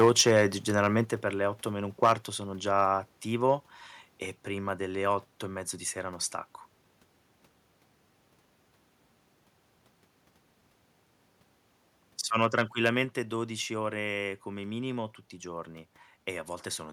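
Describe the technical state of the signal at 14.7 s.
At 14.7 s the speech signal is intact, with no audible fault at that moment.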